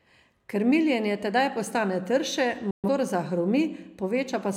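At 2.71 s, right after "tedaj postane trše", the receiver stopped getting usable frames, either losing the digital signal or rejecting frames that failed their checksum, and muted its output until good data returned. The result is a digital broadcast dropout: the speech fades out in about 3 ms and stays silent for about 128 ms, a gap consistent with roughly three lost frames. It resumes at 2.89 s, and whatever was spoken in the gap is gone.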